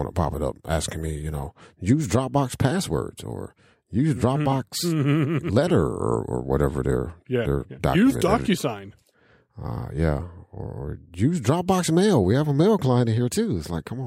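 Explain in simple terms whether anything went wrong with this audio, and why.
Nothing went wrong with it.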